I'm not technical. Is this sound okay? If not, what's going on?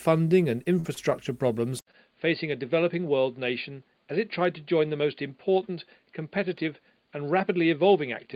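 No. Three faults can be heard.

Repeated packet loss (robotic sound), from 0.63 to 1.13 s: the sound travelled in small chunks, and four of them went missing in quick succession. Each time, the receiver covered the hole by carrying on the last bit of sound, so about a fifth of that half-second is filler. The longest hole was 46 ms. The result is a choppy, machine-like stretch with small pieces missing.

Input switched to a poorer device, at 1.79 s and lasting to the end: there's a brief silence of about 80 ms, and then the sound changes character. It turns duller because nothing above 4.8 kHz gets through, it is somewhat quieter, and it carries a new, low background noise. The most likely cause is that the recording switched to a different, lower-quality microphone or a headset mode partway through.

Short stall from a late packet, at 1.91 to 1.95 s, just after that switch: one chunk of sound arrived 21 ms late. 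The receiver ran out of sound to play, so it stretched the last moment until the chunk showed up and then continued from the same place. Nothing is lost, but that instant is held a little too long.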